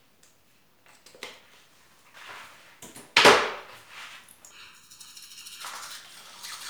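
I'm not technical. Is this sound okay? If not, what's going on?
No. From 4.51 to 5.62 s there is channel delay (comb filtering): one channel arrives under a millisecond late, so combining them cancels certain pitches, making the sound hollow and phasey.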